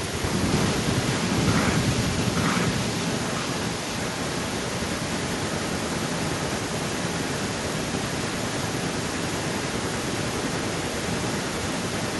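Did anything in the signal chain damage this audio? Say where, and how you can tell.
Yes: from 0.52 s to the end, a copy of the speech returns 885 ms later at about its original loudness. This is an echo leak, likely from a far-end loudspeaker that the echo canceller failed to suppress.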